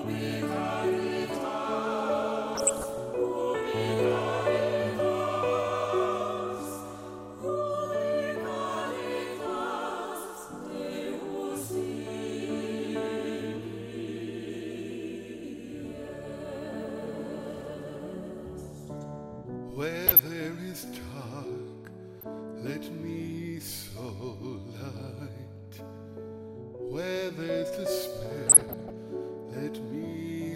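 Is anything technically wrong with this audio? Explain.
Yes, DAB burbling at 2.55–2.98 s, 20.04–20.28 s, 22.21–22.23 s, 23.99–24.10 s and 28.47–28.94 s. Weak reception lets bit errors, at a rate of roughly 0.4 to 0.7 percent, slip past error correction into the MP2 data. Corrupted samples put short blips of noise in single sub-bands, and corrupted scale factors make individual sub-bands jump in level for up to a frame, giving short noise blips and brief level jumps over the audio. A spectrogram shows scattered rectangular blocks flaring in narrow bands; the waveform shows brief irregular bursts.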